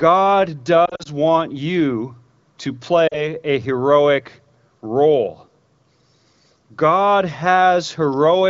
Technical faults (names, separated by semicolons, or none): lost AMR speech frames